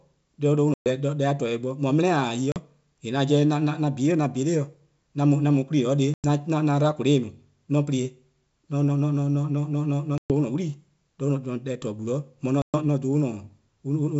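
A speech recording carried over G.722 wideband coding, with clear audio to about 7 kHz that fits the full 64 kbit/s mode, shows packet loss on an ADPCM call at 0.74, 2.52, 6.14, 10.18 and 12.62 s. Each is a hard-edged silent hole of 40 to 120 ms, covering a handful of packets. The decoder's adaptive predictor and step size drift from the sender's, so audio resumes with brief distortion before resettling.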